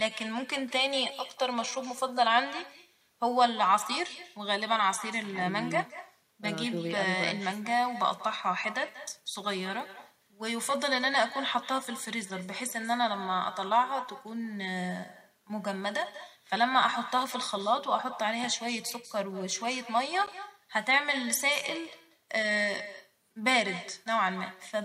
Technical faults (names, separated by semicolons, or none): echo with no canceller; block of digital silence